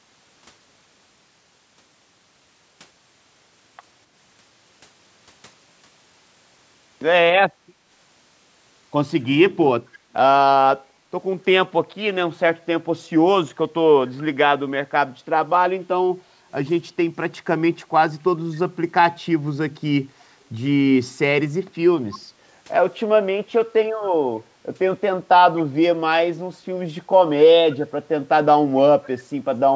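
Right at the end, from 29.03 to 29.09 s, a very faint copy of the speech comes back about 261 ms late, likely an echo leak from a speakerphone's imperfect echo canceller.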